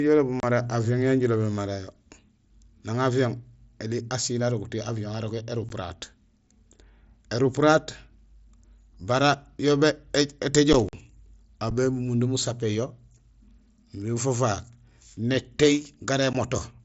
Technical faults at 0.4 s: unconcealed Bluetooth headset packet loss

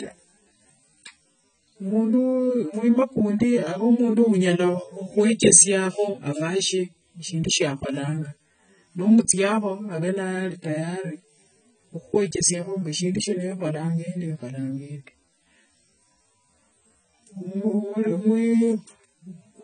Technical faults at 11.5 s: AAC compression

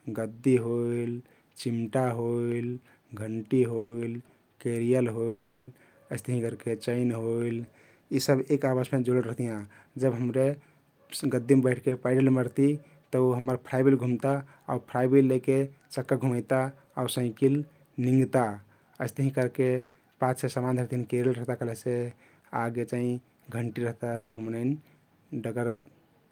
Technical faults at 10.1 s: none

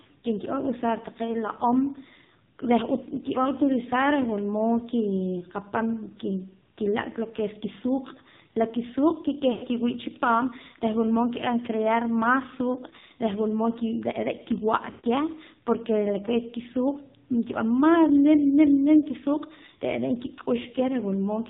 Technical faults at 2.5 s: AMR narrowband mobile codec

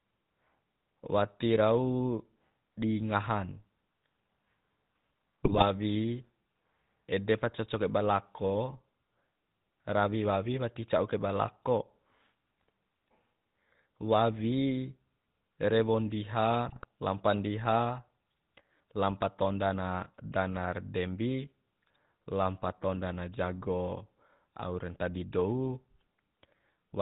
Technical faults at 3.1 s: GSM full-rate codec

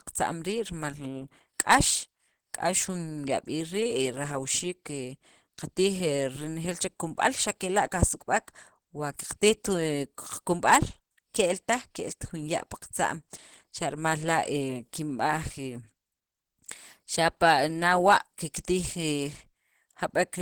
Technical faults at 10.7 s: Opus compression

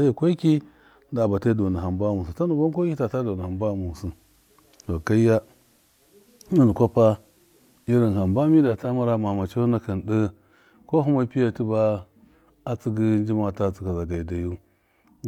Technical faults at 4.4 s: digital radio blending to analogue

